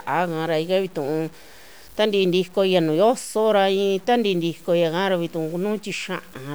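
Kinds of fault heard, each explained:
Low bit depth without dither: grainy distortion tracks the speech throughout, roughening quiet passages and dropping out or sputtering in the softest decays, with error roughly 30 dB below the signal. This likely comes from undithered truncation to a coarse scale, which fits about 7 bits.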